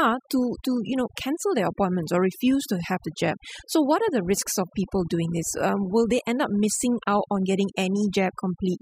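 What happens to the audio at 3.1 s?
At 3.1 s the speech carries overdone noise removal, present throughout the clip. Bands near the noise floor are pulled down, leaving twinkling specks.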